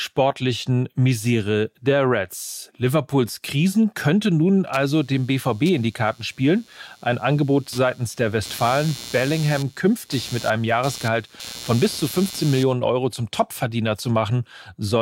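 From 4.73 s to 12.73 s there's computer activity noise riding under the speech: a buzzy, chirping texture pulsing around a hundred times a second, sitting roughly 20 dB below the talker. It comes from the computer's shifting load, as the processor, graphics card or mouse draw current, nudging the ground the audio circuit shares. That's why it tracks the machine rather than the speech, switching on and off by itself for those eight seconds.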